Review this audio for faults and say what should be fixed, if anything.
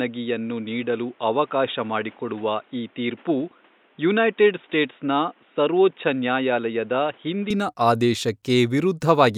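From 0 to 7.5 s the speech is dull, with nothing above 3.8 kHz, is about 5 dB quieter, and carries its own noise. That points to the input likely switched to a poorer device. Unlike a plain low-pass filter, tone, level and noise floor all change together at 7.5 s, with no gap. Lock the recording input to the intended microphone so the system cannot switch devices mid-session.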